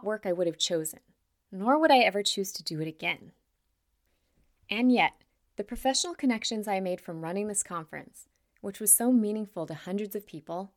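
Speech, with one brief underrun with held sample at 9.66 s, just after "which was so meaningful". For about 1.25 ms the output buffer ran dry and the converter kept putting out its last sample value, so the waveform goes flat instead of continuing. Essentially no audio was lost: playback resumes where it stopped, so the step back into the signal is a soft tick rather than a sharp click.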